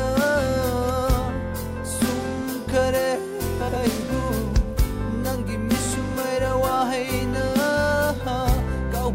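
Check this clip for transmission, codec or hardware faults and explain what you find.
One transmission fault is present: frames out of order, between 3.60 and 3.76 s. Two adjacent blocks of about 78 ms each were delivered swapped and decoded in that wrong order, which fits runs of three frames apiece. The stretch therefore plays with its two halves exchanged, heard as a brief garbled flutter. Nothing is dropped, so the overall timing stays intact.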